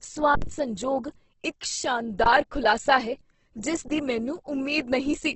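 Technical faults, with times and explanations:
Throughout, Opus compression: the speech sounds rough and grainy rather than swirly, and nothing is present above 8.2 kHz, which fits a wideband Opus encode in its CELT music mode at around 12 kbps. At so low a rate the encoder likely kept each band's energy but ran out of bits for detail, filling bands by folding lower content or with noise. That is why the damage is heavy and textured instead of leaving audible holes.
0.35–0.42 s, 2.24–2.26 s and 3.88–3.90 s, underrun with held sample: the output buffer ran dry, and the converter held its last value until data returned. The waveform goes flat, so the sound stops with hardly any click. The first gap lasts about 69 ms, just before "ਸੰਜੋਗ ਇੱਕ". The second lasts 20 ms, just before "ਖੁਲਾਸਾ ਹੈ ਜਿਸ ਦੀ". The third lasts 20 ms, right after "ਖੁਲਾਸਾ ਹੈ ਜਿਸ". Live audio of roughly the same length was lost each time.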